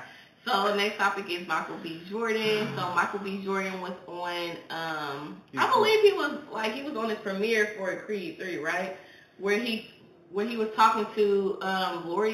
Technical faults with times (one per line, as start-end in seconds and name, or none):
0.00-12.33 imaging from linear upsampling